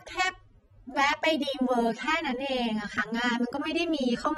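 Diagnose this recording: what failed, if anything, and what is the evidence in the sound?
Codec stage, and it runs the whole way through: the speech sounds dull and smeared, with a warbling, fizzy edge on sibilants. That's likely AAC compression, AAC-LC starving its spectrum of bits so bands drop out, which fits a bitrate around 24 kbps.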